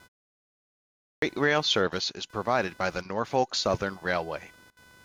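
A faint buzzing runs under the speech from start to finish. It is computer activity noise. The processor, graphics card or mouse draws changing current, and that shifts the ground the audio circuit shares with them. The result is a rough, chirping buzz pulsing at around 500 times a second. It sits well below the speech, roughly 30 dB down. It rises and falls with the machine's workload, not with the talking.

At 0.97 s the speech resumes after nearly a second of silence. It is a clipped start after a pause. During the silence the output device went to sleep. It then needed time to wake and lock onto the signal again. About 253 ms of sound is lost, up to 1.22 s. The first sounds of the speech are swallowed. The speech bursts in abruptly, already underway, with no natural onset.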